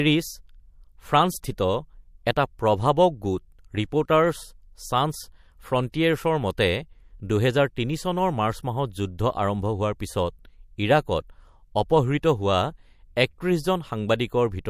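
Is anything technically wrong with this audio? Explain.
Yes. At 5.92 s a sharp attack in the speech shows pre-echo. The codec appears to code this stretch with a long transform window of about 36 ms and no switch to short blocks, so quantisation noise sized for the loud onset is spread across the whole block, including the quiet moment before it. The result is a short hiss, roughly 16 dB above the surrounding floor, lasting about 19 ms ahead of the attack, which sounds softened and smeared.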